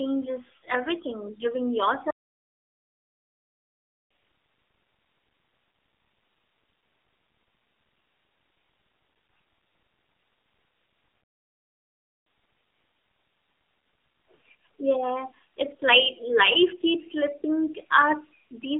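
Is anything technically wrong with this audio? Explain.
Yes. The speech has three kinds of fault.

Throughout, the speech sounds thin, boxy and somewhat buzzy and synthetic, confined to roughly 300 Hz to 3.5 kHz. That is the AMR narrowband mobile codec: a low-rate vocal-tract model with a few excitation pulses per frame, here fitting a 7.4 kbps mode, so the damage is plainly audible.

From 0.61 to 0.64 s, and again from 14.36 to 14.38 s, there are brief warbly dips. These are lost AMR speech frames. The decoder repeats its last good pitch and vocal-tract settings at falling gain. The first gap, 40 ms long, fits two lost frames. The second, about 20 ms, fits one.

From 2.10 to 4.11 s the sound stops dead for 2 seconds, and from 11.22 to 12.27 s it stops for about 1.05 seconds. This is a playback stall, where the output goes silent mid-flow. The likely cause is the player running out of data or its thread being blocked until it recovered.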